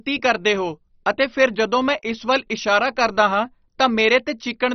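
Throughout the speech, nothing sounds above 6.1 kHz and flickering bands leave a gurgling, granular grit, likely heavy MP2 compression near 32 kbps. A plain low-pass would just sound muffled.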